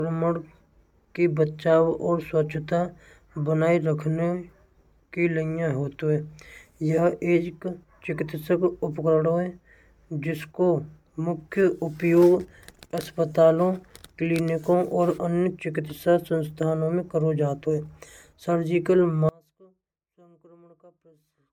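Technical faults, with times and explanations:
Throughout, generation loss: the speech sounds swirly, hollow and smeared, with blurred attacks, likely from about five successive MP3 encodes at 128 kbit/s stacking quantisation noise.
19.29 to 21.53 s, one channel inverted: the centred speech drops by about 32 dB in mono, likely because one channel's polarity is reversed and cancels the shared signal.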